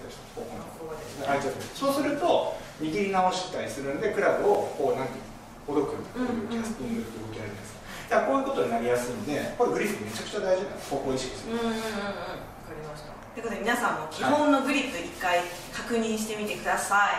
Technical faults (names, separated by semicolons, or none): block of digital silence